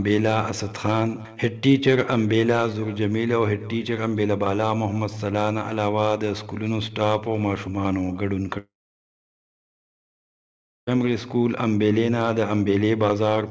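The audio drops out from 8.58 to 10.89 s: a brief fading buzz or hiss, then about 2.2 s of silence, likely a long network dropout losing that stretch entirely. Nothing's heard above 8 kHz, which fits a G.722 call path.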